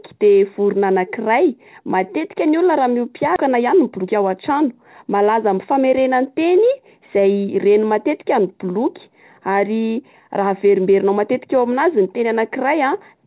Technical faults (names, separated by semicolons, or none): skip ahead; jitter buffer speed-up